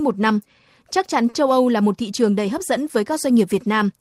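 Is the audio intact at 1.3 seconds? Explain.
No. From 1.29 to 1.35 s there is a short stall from a late packet: a packet failed to arrive on time, the jitter buffer drained, and the receiver held the last sound for about 40 ms until the packet turned up, then resumed from the same point. Nothing is lost, but everything after plays 40 ms later. To the ear, a sound drags on slightly too long, with a faint buzz or dip in the stretched section.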